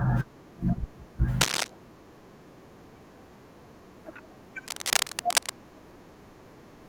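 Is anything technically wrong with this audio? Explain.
Yes. Twice, from 1.41 to 1.71 s and from 4.67 to 5.50 s, cable scratch noise appears. A worn cable or connector being moved is the likely cause, its contact resistance jumping rapidly. This lays dense, uneven scratching bursts over the speech, somewhat louder than the speech itself.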